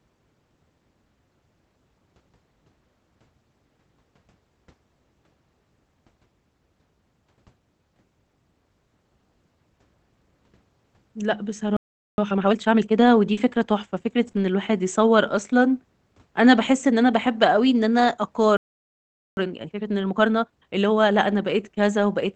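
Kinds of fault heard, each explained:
Playback stall: The speech stops dead in mid-flow, then resumes. This happens at 11.77 s for about 0.41 s, and at 18.57 s for about 0.80 s. The player likely ran short of data or had its thread blocked. The output stays silent until it recovers.
Time-compressed catch-up: Straight after each stall, the speech is hurried at 1.5 times normal speed. The pitch stays where it should be. The player drops small slices and cross-fades the joins to clear its backlog. This happens from 12.18 to 13.00 s and from 19.37 to 20.97 s.
Short concealed packet loss: Brief holes in the stream were filled by extending the preceding sound, then blending back into the real audio. There are 40 ms at 13.33 s and 20 ms at 14.31 s. Each one sounds like a quick smear or wobble.
Lost packet rebuilt from error correction: Packets were lost, but the next packet carried a low-bitrate Opus backup copy. 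That copy was played, so there is no gap. Those moments just sound rougher and noisier. This happens at 13.37, 14.27 and 16.65 s, plus 40 ms at 14.35 s.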